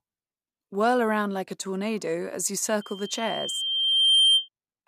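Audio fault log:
2.81–4.49 s, loudspeaker feedback squeal: after "a tornado as you", a 3.1 kHz tone swells over about 1.5 s to about 10 dB above the speech, as the microphone-loudspeaker loop exceeds unity gain at that frequency. A spectrogram shows one brightening horizontal line, and the waveform shows a growing envelope.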